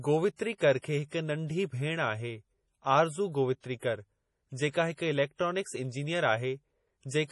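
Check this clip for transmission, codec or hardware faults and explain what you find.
One fault runs throughout: heavy MP3 compression, likely at about 32 kbps. The speech sounds watery and swirly. A spectrogram shows a hard ceiling at 11.5 kHz and flickering gaps as weak bands drop out.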